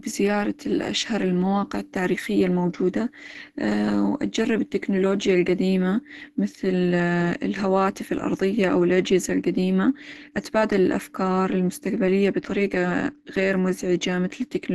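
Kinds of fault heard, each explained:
Opus compression: A low-rate Opus encoder, likely running in its hybrid speech mode at a rate that points to about 16 kbps, has starved the signal of bits and narrowed the band, so nothing survives above 12 kHz and the speech sounds plainly muffled, hoarse and grainy throughout.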